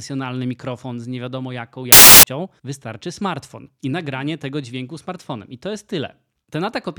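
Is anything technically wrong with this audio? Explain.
Yes. From 1.92 to 2.23 s, samples built from the wrong bytes: misordered bytes promote low bits to dominant values, giving loud, harsh broadband noise that shows as a tall waveform block and flat broadband spectrogram smear.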